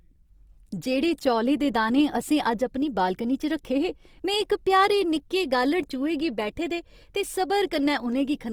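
Throughout the speech, the high band stays present right up to a cut-off at 20.2 kHz, yet voiced sounds come across grainy and rough, with a noisy texture where clean harmonics should be, and the damage is plainly audible. This points to Opus compression in its music (CELT) mode, likely at a low bitrate of around 24 kbps: the encoder holds each band's energy but fills starved bands with folded or noise-like content rather than leaving gaps.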